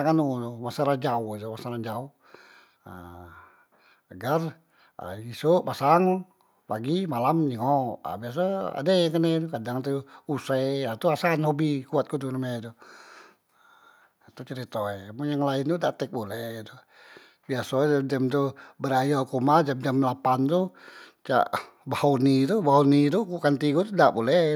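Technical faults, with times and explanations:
No technical faults are audible anywhere in the speech.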